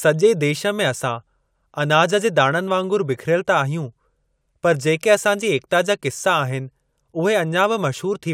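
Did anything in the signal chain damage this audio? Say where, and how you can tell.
No, nothing in the chain did.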